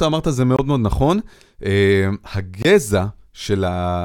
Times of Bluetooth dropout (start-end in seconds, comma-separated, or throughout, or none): 0.56-0.59, 2.62-2.65